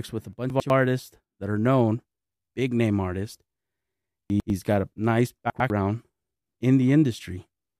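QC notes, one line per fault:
0.5–0.7 s, 4.3–4.5 s, 5.5–5.7 s: chunks out of order. In each span two 100 ms pieces play swapped, so the sound briefly jumbles at three hard joins. Unlike a dropout or skip, nothing goes missing; all the material is present but in the wrong order.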